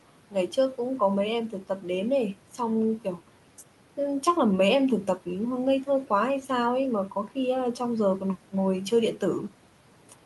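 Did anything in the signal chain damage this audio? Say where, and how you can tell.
Yes. Between 1.51 and 1.85 s the speech briefly turns faint and swallowed, with the softer low-level parts dipping by up to about 8 dB while the louder parts carry on. Only around a tenth of a second is affected in total. That points to call processing: speech cut by the noise suppressor. Its gain stage mistook quiet speech energy for the room noise, which sits about 21 dB below the speech, and turned both down together.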